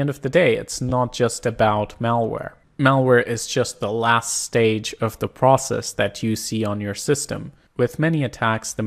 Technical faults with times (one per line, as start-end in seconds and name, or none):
0.89-0.91 repeated frames